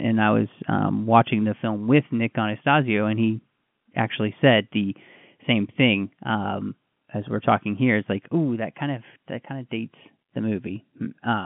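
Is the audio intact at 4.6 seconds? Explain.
Yes, the audio at 4.6 seconds is intact, with the speech carried cleanly through the narrow telephone band of the G.711 line and no dropout, click or distortion at that moment.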